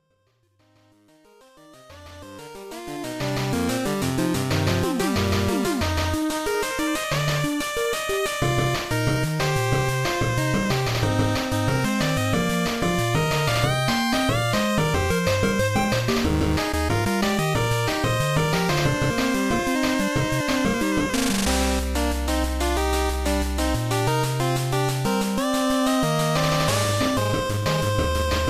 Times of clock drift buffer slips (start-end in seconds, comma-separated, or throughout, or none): none